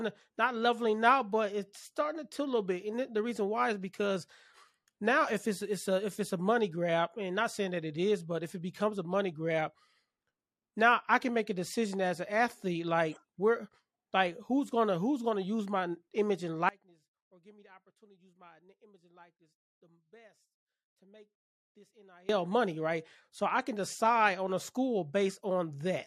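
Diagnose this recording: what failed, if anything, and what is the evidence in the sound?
Audio dropout to a faint residue, likely an intermittent analogue connection: right after "use my image and" at 16.69 s the speech collapses to a faint leak well below normal level, then snaps back at 22.29 s on "money right". That's about 5.6 s lost, with the path still live throughout.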